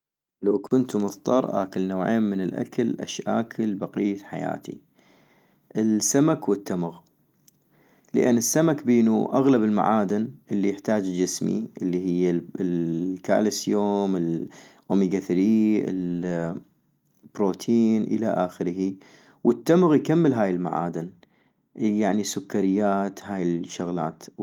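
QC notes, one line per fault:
No faults heard anywhere in this speech recording.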